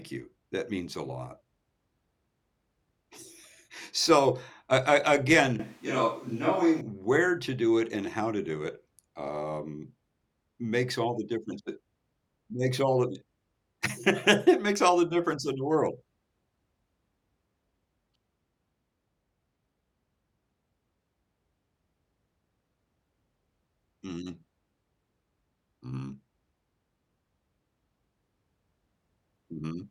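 From 5.59 s to 6.81 s, the speech suddenly turns roomy and hollow. The low end thins out, and the room becomes audible behind it. The overall level barely changes. Background noise rises to roughly 35 dB below the speech. The change back is just as abrupt, right before "where to do it". This sounds like a switch to a distant microphone. The close microphone's signal likely dropped out, leaving a pickup further from the talker.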